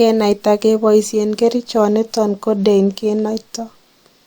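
Nothing stood out on listening to this speech recording.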